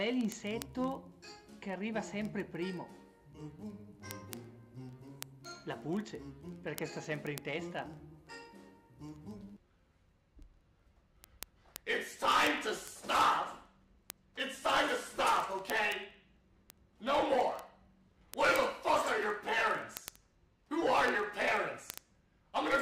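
From 0.14 s right through to 22.79 s there's a steady run of word clock ticks, a sharp click roughly every 40 ms, some louder than others. The receiving end is running on its own clock instead of locking to the source. The two clocks are off by something like 700 ppm, so they slip past each other constantly, and at each slip a sample gets dropped or doubled. That adds up to hundreds of ticks across the audio.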